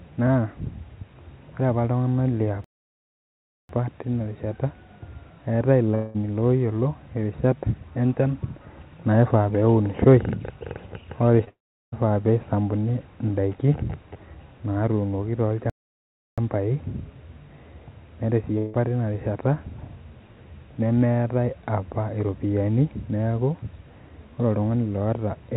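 A playback stall at 2.64 to 3.69 s cuts the speech off in mid-flow for about 1.05 s of silence before it carries on. The player most likely ran short of buffered data or had its output thread held up, so nothing reached the output until it caught up.

A long network dropout follows at 5.95 to 6.16 s. The receiver covers the gap by stretching the last sound into a fading buzzy hiss for nearly 0.2 s, and speech resumes further on. That stretch was likely never delivered, and the fill stands in for it.

Short concealed packet loss at 11.44 to 11.49 s leaves a brief smear. Roughly 20 ms of audio arrived too late for the decoder, and the receiver bridged it by extending the preceding sound before blending back.

That smear runs straight into a second long network dropout at 11.49 to 11.94 s. The extrapolated sound fades out, and then about 0.38 s of plain silence is left before speech returns past the lost portion, most likely because the network stopped delivering for nearly half a second.

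Another playback stall at 15.70 to 16.38 s halts the speech for about 0.68 s, with the same likely starved or blocked output behind it.

A third long network dropout at 18.58 to 18.76 s shows as a decaying buzz of about 0.16 s, with nothing heard of the missing audio. Across the clip the call path's bandwidth tops out at 4 kHz, which fits G.711 A-law at 64 kbps.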